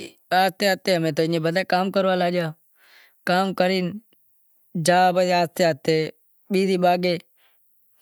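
Speech recording, no technical faults detected.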